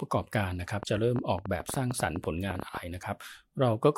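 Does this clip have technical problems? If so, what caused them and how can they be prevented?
Yes. From 0.83 to 2.78 s a train of clicks, about twenty pops at an uneven rate near 10 per second, ticks over the speech roughly 10 dB above it. They show as narrow spikes on the waveform and thin vertical lines on a spectrogram. The likely cause is interference from nearby equipment or a faulty connection or power supply. Moving other devices away from the recording chain and using sound connections and a stable power supply prevents it.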